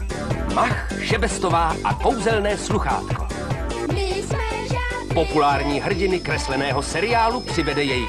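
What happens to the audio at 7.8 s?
At 7.8 s a feedback whistle sounds, running from 5.19 s to the end: a thin 5.2 kHz tone that swells and fades slowly, well below the main sound, likely from a speaker-to-microphone loop poised at feedback. On a spectrogram it is a narrow horizontal line.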